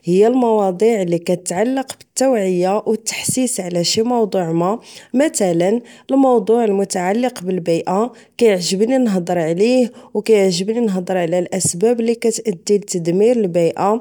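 Speech recording, with no technical fault heard anywhere in the clip.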